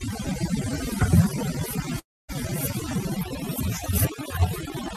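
Across the whole speech clip there is overdone noise removal. The background drops yet sparkles with isolated twinkling specks. A reduction stage set too aggressively has been shutting individual frequency bands whenever their level sat near its noise estimate, taking the softer parts of the voice along with the hiss. That band-by-band gating, rather than a uniform dullness or a steady smear, is what separates it from low-bitrate codec damage.

From 1.99 s to 2.31 s the audio breaks off. The last sound is stretched into a fading buzz or hiss, which gives way to about a quarter-second of silence before the voice resumes. Roughly 0.3 s of material never returns. The likely cause is a long network dropout, with the receiver filling the gap by extending what it last had. That synthetic, decaying tail and the lost content set it apart from a clean edit or a brief click-like glitch.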